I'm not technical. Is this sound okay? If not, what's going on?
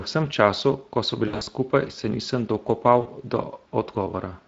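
No. Throughout, the Speex codec, an older speech-compression method used in internet calls and game chat, is audibly squeezing the speech, so it sounds rough, hoarse and noisy because too little detail survives the compression to rebuild the voice cleanly.

VoIP packet loss concealed by the speech codec occurs from 1.27 to 1.49 s, where several short gaps of up to 60 ms fall within about 200 ms, and again from 3.01 to 3.09 s. When chunks of the call went missing, the decoder filled them by stretching the last sound it had into a fading buzz or hiss, and the speech stays weak and distorted briefly afterwards.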